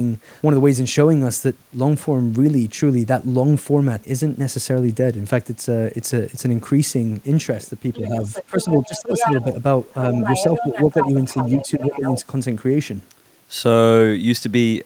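From 7.93 to 9.44 s a second voice runs underneath the main speech, only about 5 dB quieter. This is the other side's voice leaking through, likely because the echo canceller left far-end loudspeaker sound in the microphone signal. Inside that stretch, from 8.08 to 9.1 s, the talker's own speech dips by as much as roughly 15 dB, in pieces adding up to about half a second. This is speech suppressed in double talk, likely caused by the canceller turning everything down when both sides spoke at once. From 9.93 to 12.2 s the far-end voice leaks through again, softer at around 10 dB below the speech. Between 11.57 and 12.01 s the near-end speech is again suppressed in double talk, dropping by up to about 10 dB for roughly a third of a second in total.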